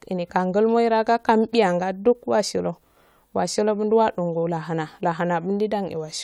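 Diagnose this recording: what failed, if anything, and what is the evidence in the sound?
Nothing in the signal chain appears to have failed: the speech signal holds steady and continuous throughout, with no audible break, level disturbance or distortion pointing to trouble at any stage.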